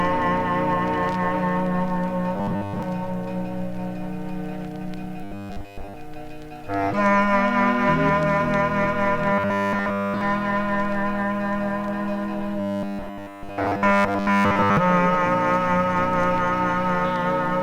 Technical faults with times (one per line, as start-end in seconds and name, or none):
2.36-2.83 robotic sound from repeated short buffers
5.24-5.95 robotic sound from repeated short buffers
9.33-10.21 robotic sound from repeated short buffers
12.60-14.77 robotic sound from repeated short buffers